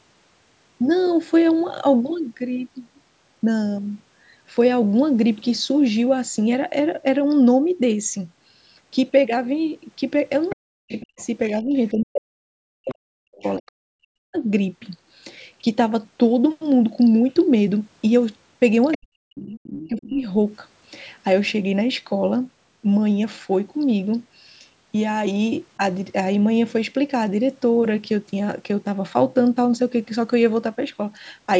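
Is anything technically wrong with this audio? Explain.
Yes, it's speech coming through a call chain with two echo-related problems.

Other side's voice leaking through, at 10.49–11.26 s, 12.89–13.69 s and 18.92–20.1 s: a faint second voice sits roughly 15 to 20 dB under the talker. It's likely loudspeaker playback reaching the mic that the echo canceller didn't fully remove.

Speech suppressed in double talk, from 10.55 to 14.37 s (about three seconds affected) and 18.97 to 20.24 s (about a second): the talker's level dips sharply, by around 40 dB at worst, right where that leak overlaps. It's likely the canceller couldn't separate the two voices and ducked everything. The band also tops out at 8 kHz.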